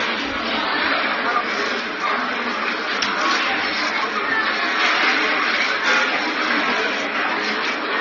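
Everyday sound, with transcoding between lossy codecs throughout. Nothing remains above 6.8 kHz. Layered artefacts suggest likely repeated re-encoding at low bitrates, each pass adding its own.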